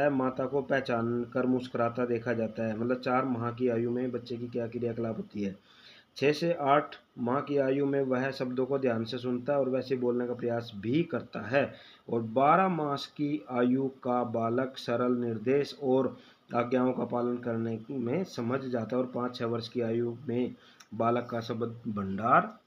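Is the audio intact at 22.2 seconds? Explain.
Yes, the audio at 22.2 seconds is intact, with no fault present at that moment.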